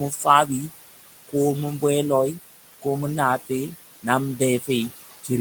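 A speech recording in which the background noise sinks between phrases and swells back under them. These are noise suppressor artifacts: the suppressor pulls the room noise (about 13 dB below the speech) down by about 16 dB. At 3.39 to 3.5 s, just after "ko mu na", and at 4.6 to 4.69 s, the speech briefly goes faint and swallowed for about a tenth of a second each. These dips are speech cut by the noise suppressor, which mistook those moments for noise and turned them down by about 12 dB and 9 dB respectively.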